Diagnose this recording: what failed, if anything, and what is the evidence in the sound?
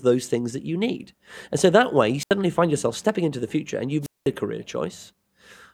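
Twice a brief rise of hiss collapses into near silence before the talker returns: 2.20 to 2.31 s after "so that way you", muting for 77 ms, and 4.02 to 4.28 s after "the future and you've", muting for 201 ms. This is wireless microphone squelch dropout on the analogue radio link. The FM signal faded until the receiver's squelch shut off its output.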